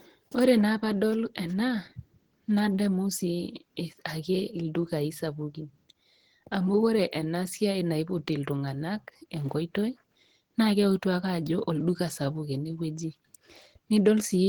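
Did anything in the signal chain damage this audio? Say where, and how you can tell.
Yes, the codec stage. Across the whole clip the speech has a muffled, hoarse, grainy quality, and the top end still reaches about 20.1 kHz. That fits likely Opus compression at a low rate near 16 kbps, where the hybrid speech mode trades detail for bandwidth.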